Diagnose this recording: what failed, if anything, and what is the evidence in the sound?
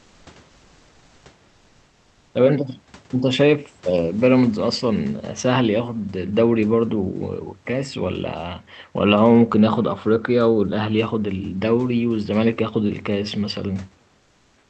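Comfort noise in place of the background at 0–0.25, 0.49–1.25 and 14.17–14.7 s, likely Opus DTX in the codec: featureless noise, about 2–5 dB quieter, smooth on a spectrogram.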